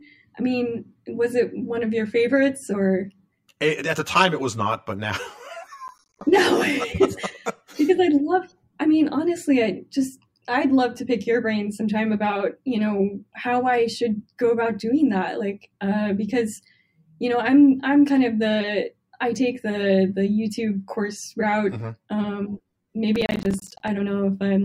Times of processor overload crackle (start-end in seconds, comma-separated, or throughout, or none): 5.88-6.21, 23.16-23.88